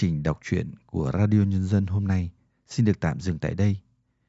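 No technical faults are audible.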